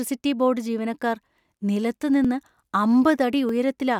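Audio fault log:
2.25 s and 3.49 s, dropped buffer (overrun): the likely cause is the software failing to read its samples before the hardware overwrote them, so a few milliseconds vanish and the edges butt together. Each is heard as a jump, the first just after "ബോർഡ് ജീവനക്കാർ നിലത്തു".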